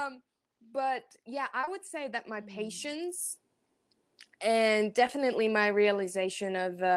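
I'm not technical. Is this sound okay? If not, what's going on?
No. At about 1.61 to 1.69 seconds there's a very brief smear or wobble in the speech. This is short concealed packet loss: two tiny back-to-back pieces of the call arrived too late, and the receiver patched the gaps by continuing the sound just before them.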